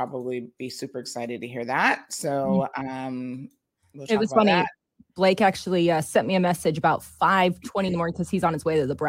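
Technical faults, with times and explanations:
0.31–8.81 s, clock slip clicks: faint ticks recur at a steady rate of about three per second, roughly thirty in all. This is likely two unsynchronised clocks around 70 ppm apart, each slip dropping or repeating one sample. The even, clockwork spacing distinguishes it from random crackle.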